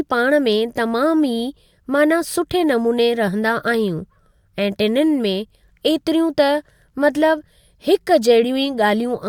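No technical faults can be heard anywhere in this speech recording.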